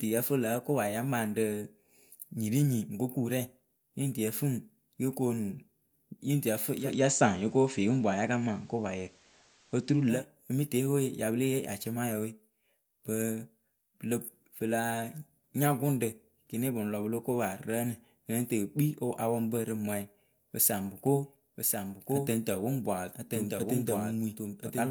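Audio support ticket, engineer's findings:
6.78–10.23 s: hiss about 35 dB down, level shifts about 3 dB across 155 ms crossfades. Receiver blending digital radio to analogue FM.

21.06 s to end: dry full-band repeat about a second late, about 5 dB quieter, abrupt onset. Likely doubled audio track via a second capture path.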